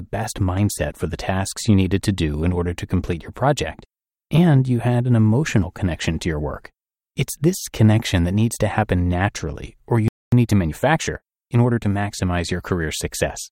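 At 10.08 s, just after "happen naturally or you", the speech cuts out mid-flow and the output goes completely silent for about 0.24 s, until 10.32 s. This is a playback stall. The player likely ran short of buffered data or had its audio thread blocked, so nothing reached the output until it recovered.

From 10.32 s to 11.92 s the speech sounds hurried, running about 1.15 times faster than normal while the pitch stays where it belongs. This is time-compressed catch-up. After the gap the player had fallen behind, so it cut small pieces out of the backlog and cross-faded across the joins until it returned to normal speed.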